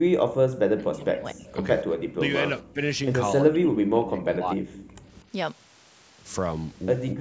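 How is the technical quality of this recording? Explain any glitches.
The recording has a couple of call-related problems, mostly the talker getting ducked, plus two faint echo scraps.

Speech suppressed in double talk happens at 0.0–0.25, 0.57–1.47, 2.12–2.31, 2.62–2.81, 3.41–4.96 and 7.13 s to the end. The voice dips or drops out in chunks, sometimes by as much as 35 dB. That's likely the echo canceller mistaking overlapping far-end audio for echo and pulling everything down.

Echo leak shows up as two brief, quiet delayed copies of the voice, at 1.46–1.54 and 4.79–4.89 s. Each lands about 240 ms behind the original and sits far below the speech. It's likely loudspeaker pickup that the far end's canceller didn't fully remove. The call's microphone processing caps the band at 8 kHz.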